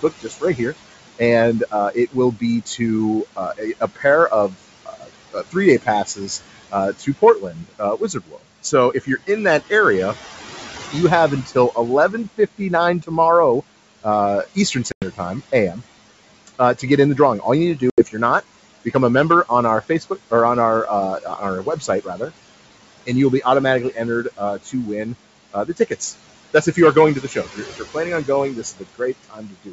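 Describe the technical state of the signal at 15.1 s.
At 15.1 s the signal is just past a packet loss on the ADPCM call. About 100 ms of audio, roughly five packets, went missing from 14.92 to 15.08 s and was filled with silence. During that gap the receiving decoder's adaptive predictor and step size drifted out of step with the sender's. So at 15.1 s the sound comes back from a hard-edged hole slightly distorted, and it takes some tens of milliseconds to settle.

This moment also falls inside a stretch from 14.03 to 20.32 s where there is speech cut by the noise suppressor. The suppressor mistook parts of the speech for background and turned them down by up to about 12 dB, for roughly 400 ms in total across the span. Parts of the speech sound swallowed or faint here, before "or on our uh".

Underneath both runs the noise suppressor's ongoing action, which lowers the room noise by about 17 dB frame by frame. 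The background sinks in pauses and rises under the speech.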